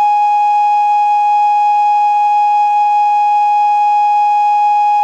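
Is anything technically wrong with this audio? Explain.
No, nothing technically wrong stands out here; the music comes through without any audible glitches or problems.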